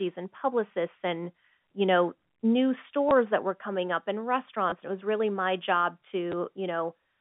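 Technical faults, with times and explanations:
3.09 to 3.11 s, 4.70 to 4.72 s and 6.32 s: packet loss with last packet repeated. The audio replays its previous fragment, not silence, giving a brief stutter or blip, which fits 10 ms packets.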